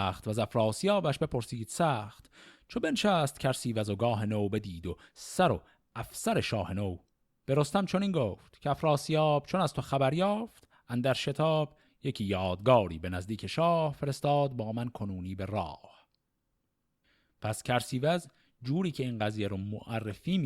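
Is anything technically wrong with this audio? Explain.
Yes. Corrupt frames were decoded at two points in this speech. The first runs from 4.87 to 4.91 s, the second from 20.09 to 20.16 s. Flipped bits in the compressed data were played anyway. Misread gains and codes put energy at wrong frequencies. Each burst is a short chirp or noisy blip, roughly the length of a few damaged frames. The first is faint, near -45 dBFS. The second is louder, around -30 dBFS.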